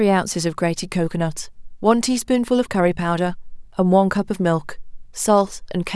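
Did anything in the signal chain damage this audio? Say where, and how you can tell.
No, no signal-chain damage heard.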